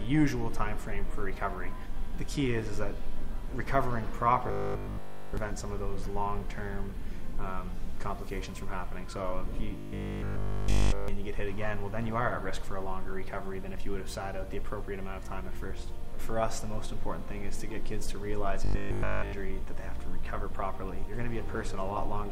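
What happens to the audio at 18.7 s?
Audio delivery likely stalls here, and the playback side covers the gap by looping one short buffer over and over instead of playing fresh material. This is robotic sound from repeated short buffers, running from 18.65 to 19.33 s. The loop repeats at 50 Hz, which points to a buffer of about 20 ms. Essentially all of that span is repeats, so the sound collapses into a rigid, metallic 50 Hz buzz that only loosely tracks what should be there.

Underneath that, and across the whole clip, the signal has likely been reduced to about 9 bits by rounding, with no dither added. This is low bit depth without dither. The rounding error rises and falls with the sound, sitting roughly 40 dB below it, so quiet passages turn grainy and gritty, and that texture colours the buzzing section too.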